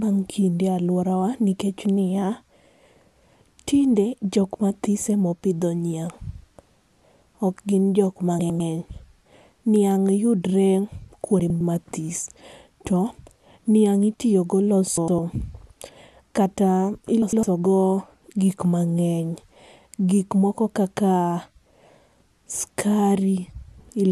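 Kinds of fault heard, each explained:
Frames out of order: two neighbouring blocks of about 105 ms, which fits four-frame runs, get decoded in swapped order. The sound briefly scrambles into a garbled flutter at 8.39, 11.40, 14.97 and 17.22 s. No time is lost.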